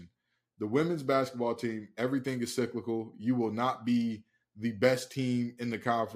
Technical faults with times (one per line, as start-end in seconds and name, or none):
none